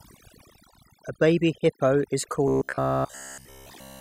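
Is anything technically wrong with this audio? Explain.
Yes, two things. Overdone noise removal runs through the whole speech clip: the reduction is pushed so hard that bands near the noise floor get cut away along with quieter parts of the voice, leaving near-silent gaps with twinkly specks.

Then from 2.48 s to 4.01 s there's robotic sound from repeated short buffers: a rigid metallic buzz at about 66.8 Hz. That's likely a roughly 15 ms chunk being replayed over and over while most of the real audio is skipped.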